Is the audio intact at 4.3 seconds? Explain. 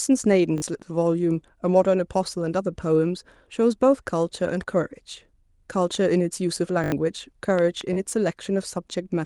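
Yes, at 4.3 seconds the speech runs cleanly, with no dropout, click or other disturbance at that moment.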